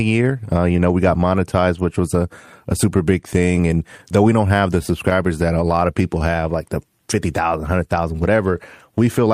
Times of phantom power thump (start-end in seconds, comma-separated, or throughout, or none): none